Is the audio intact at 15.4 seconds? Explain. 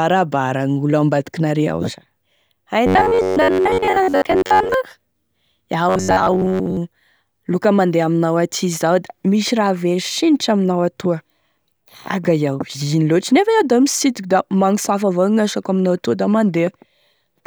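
Yes, the audio at 15.4 seconds is intact, with no fault present at that moment.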